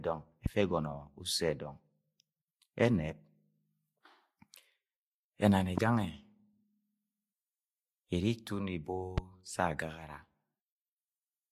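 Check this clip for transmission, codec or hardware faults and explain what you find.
Three loud pops interrupt the speech, at 0.46 to 0.48 s, 5.78 to 5.80 s and 9.18 to 9.20 s. Each is a single sharp pop, around 15 dB above the speech. The likely cause is a sudden voltage pulse, such as static or a switching or driver glitch, entering the signal path. The speech carries on unbroken beneath each pop, which separates it from a dropout or buffer glitch, where the sound itself would break.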